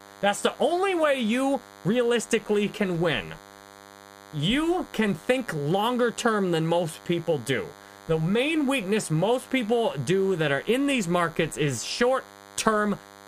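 A nearby DECT handset or base station is transmitting its short radio bursts every 10 ms, and something in the recording chain is rectifying them into the audio, so this speech clip carries DECT cordless phone buzz from start to finish. The result is a steady, thin buzz at 100 Hz, rich in harmonics, sitting roughly 25 dB below the speech.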